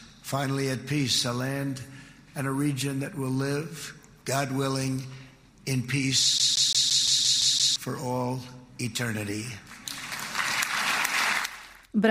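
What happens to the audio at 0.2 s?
Nothing goes wrong at 0.2 s; the audio plays through that moment intact, with no dropout, click or distortion.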